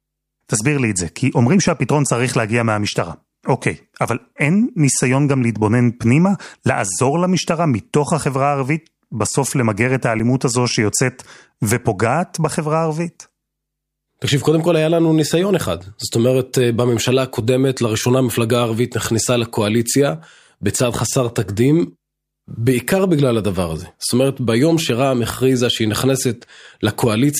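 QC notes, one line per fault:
10.19 s, block of digital silence: a short tick or dip as the audio cuts out for 5.8 ms with no fade, which fits a 256-sample buffer left unfilled or holding invalid values.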